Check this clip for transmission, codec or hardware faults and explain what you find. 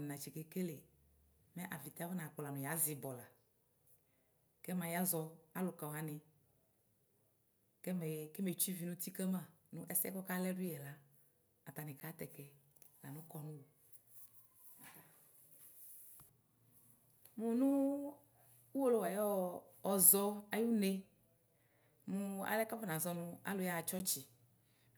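Two faults appear in the speech, both of the same kind.

A block of digital silence occurs at 12.00 s and again at 23.99 s. Each time, about 10 ms of the signal drops to silence with no fade in or out, so both edges are abrupt and the short hole is heard as a tick or dip.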